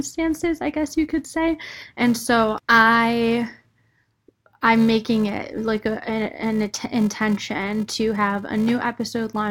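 Filter restarted on every block, throughout the speech: the filter drops its stored state at each block boundary and starts again from silence, so every block opens with a small transient. These repeat at 375 Hz, which fits a 128-sample block, giving a buzz that rises and falls with the speech level.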